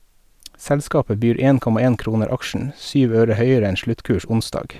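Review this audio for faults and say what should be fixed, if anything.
Nothing stood out on listening, so there is nothing here that needs fixing.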